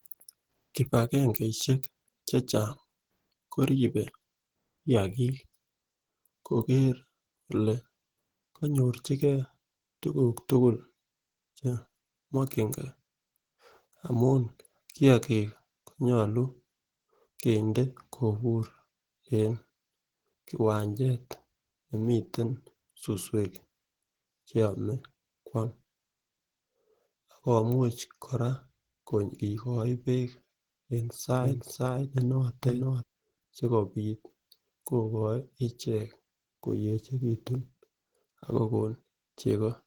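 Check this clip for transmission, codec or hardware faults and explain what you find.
Two problems stand out: codec damage across the whole clip, and a brief stretch where the audio plays twice.

Opus compression runs throughout, most likely the cause of the hoarse, muffled and grainy texture on the speech. The hybrid speech mode fits a low bitrate around 16 kbps. Bandwidth still reaches 20.2 kHz, so it's rough rather than dull.

A doubled audio track appears from 31.41 to 33.03 s. A second copy follows roughly half a second behind, at about the same level, with no room decay, and it cuts in and out abruptly. A slower capture path or an edit misalignment is the likely cause.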